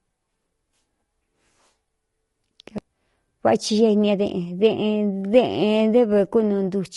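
Throughout the speech, the signal has likely passed through low-delay AAC compression, with damage consistent with AAC-ELD at around 32 kbps. Its short frames resolve pitch harmonics poorly, so the voice sounds plainly rough and grainy, with noise filling the gaps between harmonics.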